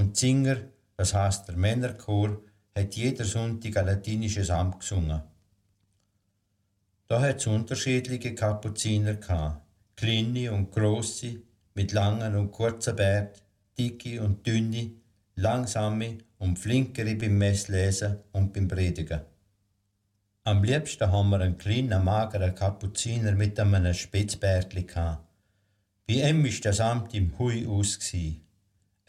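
Clock drift between sender and receiver runs through the whole clip: the sender's clock runs about 3% slow, so the receiver's jitter buffer keeps draining. Small timing hiccups recur at uneven intervals.

From 0.06 s to 28.74 s, the receiver makes repeated timing corrections, duplicating short pieces to stay in step with the slower sender. This stretches the sound to about 97% speed and adds roughly 0.7 s overall.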